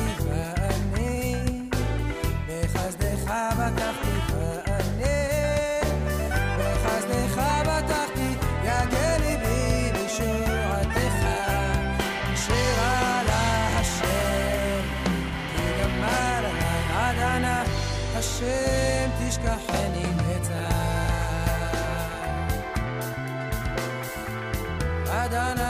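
No technical faults can be heard anywhere in this audio.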